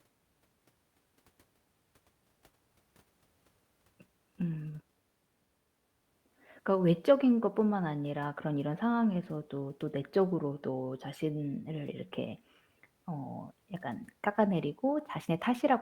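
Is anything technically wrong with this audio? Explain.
No, the speech signal is technically sound, with nothing in it that points to a fault in how it was captured, processed or transmitted.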